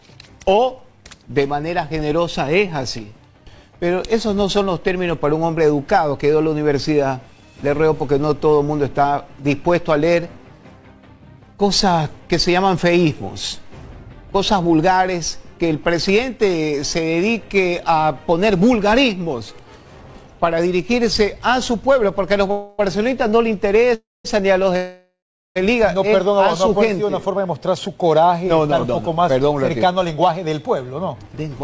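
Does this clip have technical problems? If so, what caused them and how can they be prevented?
Yes. Three call audio freezes come in quick succession, at 22.51 to 22.81 s, 23.95 to 24.26 s and 24.76 to 25.58 s. Each begins with the last sound stretched into a fading buzz or hiss. In the second and third this decays to silence for about 200 ms and 400 ms. The sound then resumes where it left off, having lost nothing but running 276, 300 and 792 ms later. The likely cause is packets stalling in transit so the jitter buffer drained and the receiver had to fill the wait. A more stable network path or a deeper jitter buffer would prevent this.

From 29.39 to 31.63 s the audio sounds rushed at an unchanged pitch. This is a jitter buffer speed-up running at about 107% of normal speed. The buffer held more audio than it aims for. The receiver trimmed pitch-period-sized slices repeatedly, cutting roughly 150 ms to bring the delay back down. 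A more stable network path, so packets do not arrive in bunches, prevents the backlog that forces this catch-up. The call path itself carries nothing above 8 kHz, which fits G.722 at 64 kbps.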